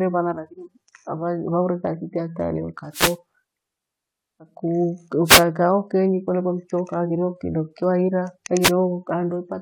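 Wireless microphone noise hits interrupt this speech clip at 2.92–3.17 s, 5.24–5.45 s and 8.61–8.71 s. In each, the analogue FM radio link fades as reflected signals cancel, so receiver noise rises through the voice as a short burst of noise.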